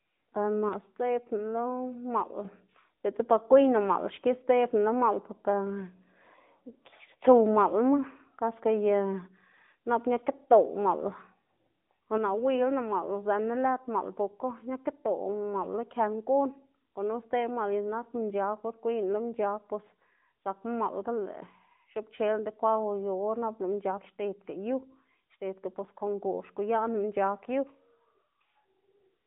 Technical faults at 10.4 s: AMR narrowband mobile codec

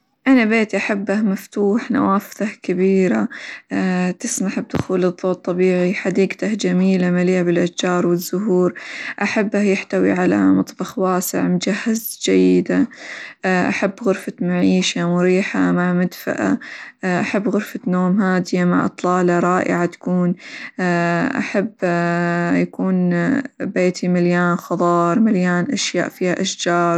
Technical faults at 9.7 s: Bluetooth SBC compression

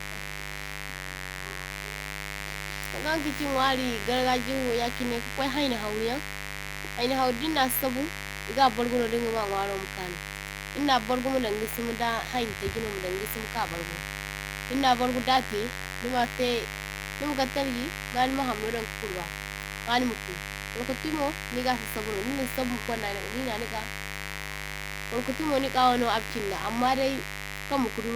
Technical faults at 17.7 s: mains buzz

